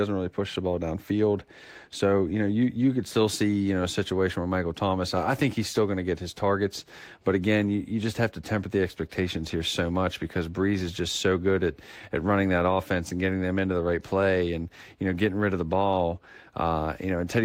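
Nothing in the speech stands out as a technical fault at any point, so there's nothing here to flag.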